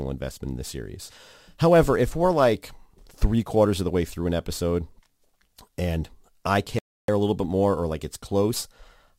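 Speech, with a clean dropout to silence from 6.79 to 7.09 s, then it resumes. That's likely a Bluetooth stall: the headphones' buffer ran dry waiting on resent packets.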